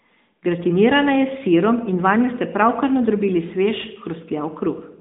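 Speech heard throughout through an AMR narrowband mobile codec (AMR-NB), the 2G/3G phone speech coder. The audio is confined to a line band of about 200 Hz to 3.7 kHz, so it lacks low-end body and high-frequency air. The codec rebuilds the voice from a vocal-tract model excited by sparse pulses in short frames. That coding damage is plainly audible as a synthetic, buzzy edge, which fits an upper mode around 10.2 kbps.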